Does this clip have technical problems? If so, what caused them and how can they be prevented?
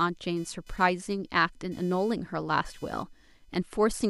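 Yes. Computer activity noise runs through the whole recording: a faint buzzing chirp, pulsing at roughly 500 Hz and sitting around 35 dB below the speech. Changing load on the processor, graphics card or mouse shifts the ground shared with the audio circuit. Unlike steady mains hum, this noise rises and falls with what the computer is doing rather than with the speech. Using an external USB interface, or a ground-isolated connection, keeps the recording path off the computer's noisy ground.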